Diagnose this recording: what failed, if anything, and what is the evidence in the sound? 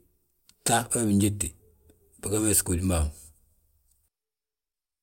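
Nothing has failed here: at no point does the speech signal show a technical fault at any stage between capture and playback.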